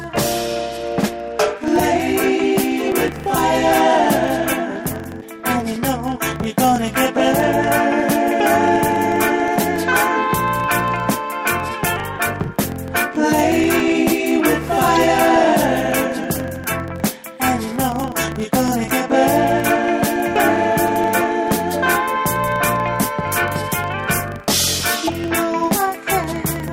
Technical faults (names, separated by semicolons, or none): filter restarted on every block; damaged data in a compressed stream